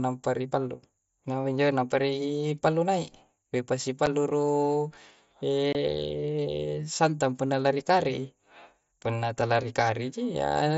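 Speech over a Bluetooth mSBC headset link suffers unconcealed Bluetooth headset packet loss: dropped voice packets leave abrupt holes at 4.06 s (about 7.5 ms) and 5.73 to 5.75 s (about 22.5 ms).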